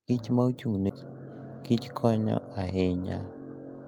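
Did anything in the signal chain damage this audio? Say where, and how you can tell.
Yes. At about 0.89 s there's a skip ahead in the network and jitter buffer stage: about 0.4 s of speech just vanishes, and the two sides butt together with no gap or fill. The buffer likely overflowed and dumped that stretch while newer audio waited.

From 1.71 to 2.73 s you get a jitter buffer speed-up. The speech runs at about 107% but keeps its pitch, so it sounds a bit rushed. The buffer was over target and trimmed pitch-period slices repeatedly, shaving off around 70 ms.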